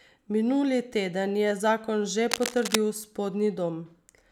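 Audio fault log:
2.31–2.76 s, cable scratch noise: just after "teden je zakon že", a burst of scratchy, rustling noise sits over the speech for about half a second. It runs about 5 dB below the speech. A worn cable or connector being moved is the likely cause, its contact resistance flickering rapidly.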